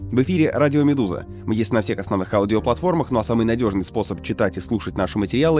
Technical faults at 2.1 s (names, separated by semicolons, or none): none